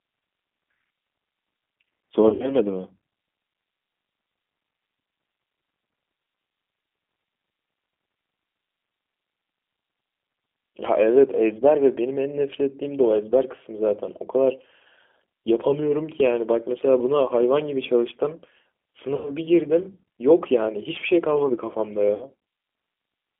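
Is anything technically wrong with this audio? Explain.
Yes. The speech carries two kinds of fault.

G.729 codec, throughout: the whole clip has passed through a low-rate speech codec, with a sound that fits G.729A at 8 kbit/s. The codec models speech from a vocal tract filter, a pitch predictor and a few pulses per frame rather than the waveform itself, and the line is confined to 200 Hz to 3.4 kHz. The damage is plainly audible: a narrow, slightly rough, synthetic quality.

VoIP packet loss concealed by the speech codec, at 2.28–2.55 s, 19.15–19.30 s and 22.15–22.25 s: packets went missing, and the decoder filled each gap by extrapolating from its last pitch and filter while lowering the gain. The first event loses about 120 ms scattered over 160 ms, the longest run 60 ms; the others lose about 100 ms and 60 ms. Each gap is stretched into a buzzy tone or coloured noise that fades, with speech staying weak just after.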